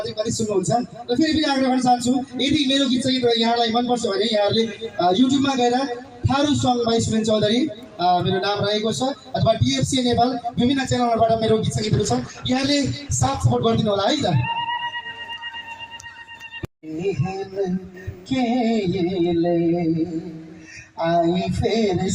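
From 11.82 to 13.71 s, a call bitrate drop makes the encoder code the audio much more coarsely for about 1.8 s. The sound turns rough and muffled, which fits a fall from 48 to roughly 14 kbps. A spectrogram shows the upper band cut off, then restored.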